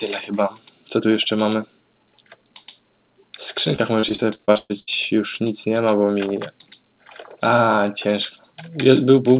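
From 3.76 to 4.89 s there's a burst of repeated packet loss, giving that robotic sound. Around a dozen holes add up to roughly 400 ms missing, the longest about 124 ms, each patched by stretching the last bit. The audio, already capped at 4 kHz by the call codec, turns choppy with pieces missing.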